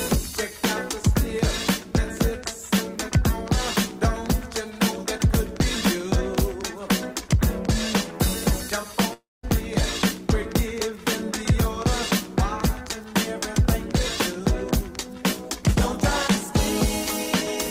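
At 9.13 s the sound turns into a fading buzz that thins to 200 ms of near silence, and audio resumes at 9.45 s with 300 ms gone. This is likely a long network dropout, the receiver extending the last sound while nothing arrived.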